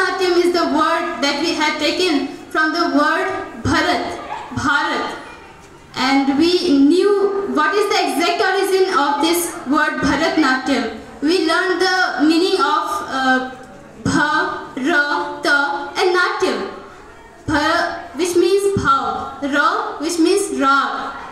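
Two single sharp clicks, at 11.97 s and 15.89 s, likely come from dropped samples, only a handful missing each time, so the waveform jumps without any audible gap, unlike a dropout.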